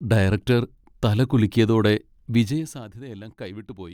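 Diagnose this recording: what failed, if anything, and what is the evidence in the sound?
Zipper noise appears from 2.37 to 2.86 s, just after "ഡയറക്റ്റർ തല കുലുക്കിയതോടെ". The level drops around 15 dB in 1 dB steps, about 40 per second. Each unsmoothed step clicks. The fault sits at the gain stage, with updates applied in steps rather than smoothly.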